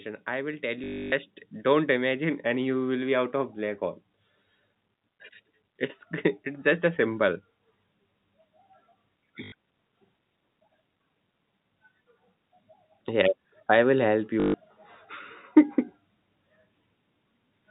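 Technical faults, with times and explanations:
0.25 to 3.86 s, automatic gain rising: the automatic gain control judged the input too quiet and kept pushing its gain up, by about 8 dB in total, so speech and background noise swell together slowly over more than three seconds rather than jumping.
0.84 to 1.12 s, 9.44 to 9.52 s and 14.4 to 14.54 s (just after "I will help"), packet loss with last packet repeated: packets went missing for 280, 80 and 140 ms, and the receiver replayed the last good one to fill each gap. The repeats ignore the pitch cycle, and the runs buzz at about 50 Hz, which fits 20 ms packets, giving a brief robotic stutter on top of the 4 kHz-limited G.711 telephone sound.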